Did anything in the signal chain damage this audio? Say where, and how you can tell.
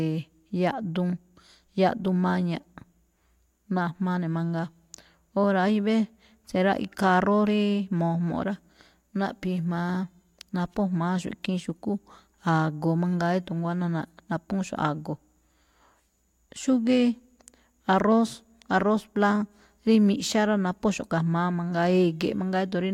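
No, no damage is audible.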